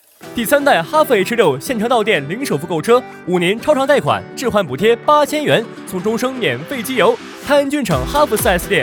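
Nothing in the recording stood out as a technical problem on listening.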